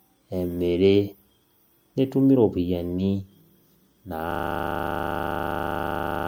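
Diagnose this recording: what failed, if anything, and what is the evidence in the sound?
The speech sounds swirly, smeared and hollow throughout, with blurred consonant attacks, likely generation loss from repeated MP3 encoding, roughly three passes at around 96 kbit/s. The codec stage is at fault. A spectrogram shows speckled holes and smeared transients, with nothing above 20.9 kHz.

From 4.31 s to the end, a 40 ms segment repeats exactly, producing a rasping 25 Hz buzz-stutter. This is a system hang loop at the driver or buffer stage: the host froze while the hardware replayed one ring buffer. The waveform shows identical blocks, and the spectrogram shows vertical stripes every 40 ms.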